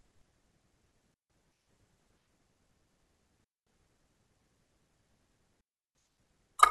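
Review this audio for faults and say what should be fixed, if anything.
Three digital wireless dropouts cut clean holes in the speech, at 1.14–1.30 s, 3.44–3.67 s and 5.61–5.95 s, lasting 0.16, 0.22 and 0.34 s. The receiver lost too much data and muted with a quick fade, with no noise bursts. Keep the transmitter in clear line of sight and close to the receiver.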